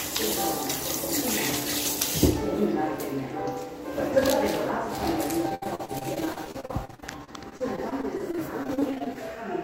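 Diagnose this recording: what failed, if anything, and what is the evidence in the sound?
The failure is at the network stage: repeated packet loss (robotic sound) from 5.49 s to 9.17 s. Across that span the audio breaks up into 38 separate gaps, the longest 69 ms. About 867 ms is patched by extending the preceding sound and 760 ms is simply missing, leaving a choppy stutter. On a spectrogram this shows as frequent short smeared or repeated slices with hard vertical edges; the waveform shows abrupt amplitude jumps and dropouts.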